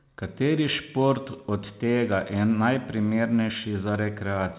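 Nothing goes wrong anywhere in this bit of speech, which just carries the usual narrow telephone sound of mu-law G.711 coding, with nothing reaching above 4 kHz.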